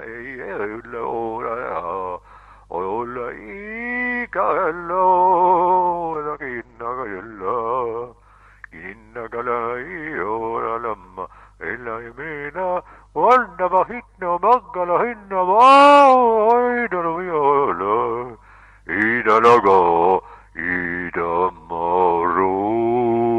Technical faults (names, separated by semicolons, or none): call bitrate drop